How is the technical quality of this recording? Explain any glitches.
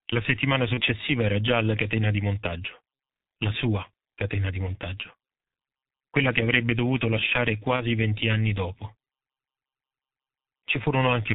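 The recording is heavily degraded by low-rate codec coding, with two brief dropouts.

G.723.1 codec, throughout: the speech is band-limited below 4 kHz and coded in coarse 30 ms frames, at a rate that fits about 6.3 kbit/s. The slow-updating voice model leaves the speech muffled and hoarse, with smeared consonants.

VoIP packet loss concealed by the speech codec, at 0.74–0.81 s just before "era già alla catena" and at 7.76–7.84 s between "che avrebbe dovuto lasciare" and "venti anni dopo": each gap fits one 30 ms frame lost. The decoder extends the previous pitch and filter at falling gain, producing a short buzzy or noisy, fading smear before normal speech recovers.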